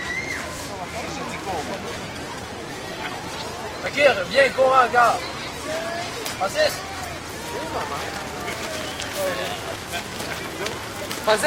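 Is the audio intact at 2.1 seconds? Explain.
No. At 2.1 s you're inside an adaptive stream at a lower bitrate, running 1.84 to 7.84 s. The connection dipped, so codec artefacts rise, which fits a drop to about 16 kbit/s.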